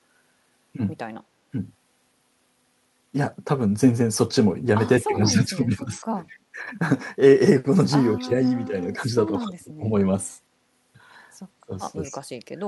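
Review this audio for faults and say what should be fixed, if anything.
Speech suppressed in double talk: the speech sinks at 5.05–6.05 s (a drop of about 15 dB), 6.54–6.58 s (a slight dip), 8.18–9.85 s and 11.66–12.27 s (both deep, around 25 dB). The likely cause is an echo canceller that, with both sides talking, could not separate the near talker from loudspeaker echo and attenuated everything. Preventing this means a canceller with better double-talk detection that keeps near-end speech open.

Echo leak: a faint, delayed copy of the speech slips through at 6.28–6.37 s, about 25 dB below the direct speech and trailing it by 203 ms. This is likely residual loudspeaker echo that the far end's canceller failed to remove and sent back down the line. Preventing this means a properly converged echo canceller with residual echo suppression, or headphones on the loudspeaker side.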